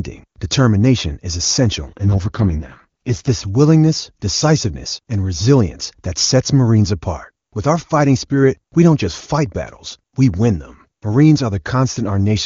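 From about 1.87 s to 3.30 s, right after "determination is" and up until "willingness decisiveness and resilience", there's an AMR rate drop. The speech doesn't cut out and the bandwidth holds, but it goes rough, buzzy and synthetic, which fits the network pushing the AMR-WB link down from its top 23.85 kbit/s mode to the lowest 6.6 kbit/s rate and spending the bits on error protection. Once the rate climbs back, the clean HD Voice sound returns.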